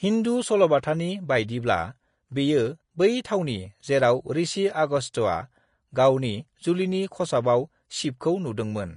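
From start to finish the speech sounds hissy and grainy, with sibilants turned to a rough wash and consonant onsets smeared rather than crisp. Nothing is heard above about 10.5 kHz, so the top end is dull as well as noisy. This is likely Vorbis compression at a low setting, consistent with a rate near 34 kbps. The encoder dropped its cut-off and quantised the remaining treble so coarsely that fine detail was replaced by noise of similar energy.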